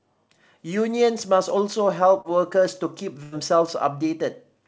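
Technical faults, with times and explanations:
2.21–2.27 s, short concealed packet loss: a brief smear in the speech, with about 30 ms of sound simply gone. That stretch reached the decoder too late, so the receiver extended the preceding sound for 32 ms, then blended back into the real audio.
3.23–3.35 s, burst of packet loss: the speech is held and fades, then jumps ahead. About 90 ms of consecutive audio was lost, so the receiver stretched the last sound for 86 ms, lowering it as the gap continued, before resuming past the missing part.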